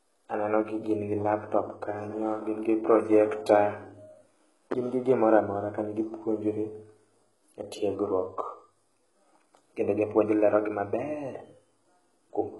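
All the way through, the speech has that gritty, metallic top end, with nothing above 11.5 kHz, likely HE-AAC compression at a very low bitrate, around 12 kbps.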